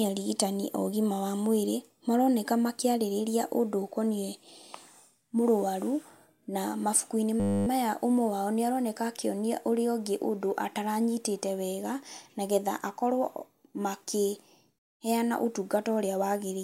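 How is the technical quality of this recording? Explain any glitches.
There's one clear glitch, a system hang loop that runs from 7.4 to 7.67 s. For that quarter-second, the machine or its audio driver stalled while the sound hardware kept replaying its ring buffer, so the same 10 ms slice of audio repeats about 27 times. With a loop that short, you don't hear a stutter. It comes out as a flat, steady buzz at 100 Hz. Once the system recovers, the speech picks up again with essentially nothing missing.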